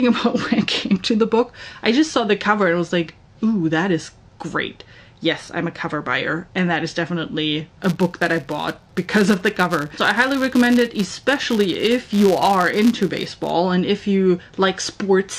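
From 7.81 s to 13.54 s, a filter restarted on every block, dropping its stored state and starting each block from silence. Each restart leaves a small transient, heard as a buzz near 172 Hz, which fits a 256-sample block, rising and falling with the sound's level.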